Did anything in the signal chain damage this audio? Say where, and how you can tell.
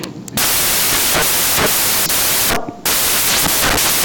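Yes: samples built from the wrong bytes, throughout. At the sample-format conversion stage, misassembled bytes push the low bits to the top, so the speech becomes loud, harsh broadband noise.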